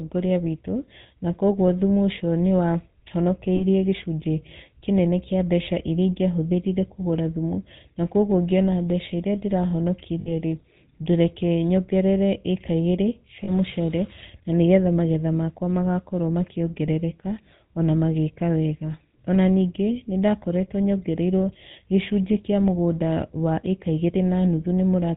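Throughout the clip, the speech passes through the GSM full-rate codec, whose sound fits its 13 kbps rate. Its vocal-tract model is driven by sparse, regularly spaced pulses with nothing kept above 4 kHz, leaving the speech plainly buzzy, gravelly and dull.

Lost GSM frames occur at 3.56 to 3.65 s, 10.2 to 10.33 s and 13.44 to 13.5 s, gaps of 40, 60 and 40 ms. The decoder fills each gap by replaying the last good frame, so the sound briefly freezes into a rough, metallic ring.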